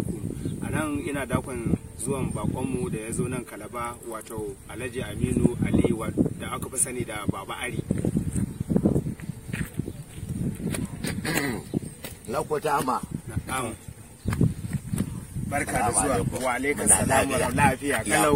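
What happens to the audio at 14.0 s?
Nothing goes wrong at 14.0 s; the audio plays through that moment intact, with no dropout, click or distortion.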